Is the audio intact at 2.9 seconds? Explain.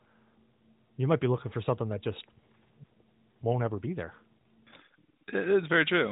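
Yes, at 2.9 seconds the speech runs on without any dropout, glitch or other fault, carried through the narrowband mobile channel.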